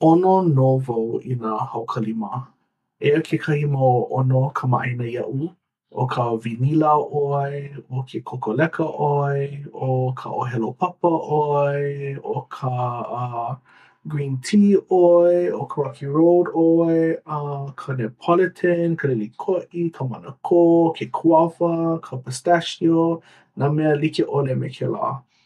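Speech recording with no audible technical faults anywhere.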